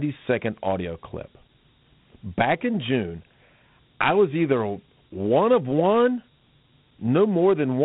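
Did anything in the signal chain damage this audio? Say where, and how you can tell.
Yes, at the codec stage: Dialogic VOX ADPCM coarsely quantises the speech throughout, leaving gritty hiss trailing it and nothing above 3.9 kHz, which fits 32 kbps.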